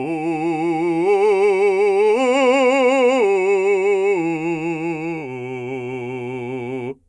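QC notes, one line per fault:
Music clip: no faults found.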